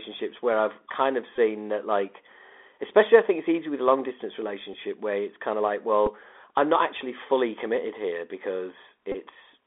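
The Bluetooth CVSD headset codec shapes the whole recording. The speech sits in a narrow telephone band, roughly 300 Hz to 3.6 kHz. Nothing higher gets through. The one-bit delta coding, consistent with 64 kbps, cannot track fast, loud high sounds. S sounds turn scratchy. A grainy hiss runs under the voice. The damage is plainly audible.

Bluetooth headset packet repeated faults appear four times. The first runs from 1.36 to 1.39 s and replaces about 19 ms of audio. That fits five lost packets. The chip replays the previous packet's bits every 3.75 ms, so a short buzz near 267 Hz takes over. Brief buzzes follow at 4.73 s and 6.06 s. Each covers 7.5 ms, likely two repeated packets. The last, from 9.12 to 9.15 s, is the longest at 22.5 ms.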